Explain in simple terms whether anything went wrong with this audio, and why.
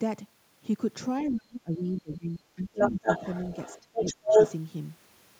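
Two things go wrong here, and they overlap.

The first is speech suppressed in double talk. From about 1.29 to 3.07 s, and again from 3.80 to 4.34 s, the talker's voice sinks sharply, at times almost to nothing, for roughly a second and a half in the first stretch and under half a second in the second. This is likely the echo canceller turning everything down because both people were talking at once.

The second is the other side's voice leaking through. From about 2.75 to 3.80 s, and again from 3.97 to 4.54 s, a second voice can be heard, coming from the talker's loudspeaker into their microphone. This is likely because the echo canceller didn't fully remove it. It differs from ordinary room echo because it is a separate person's voice rather than a blurred repeat of the talker's own.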